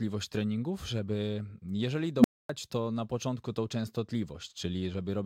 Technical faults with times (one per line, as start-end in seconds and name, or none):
2.17-2.49 unstable filter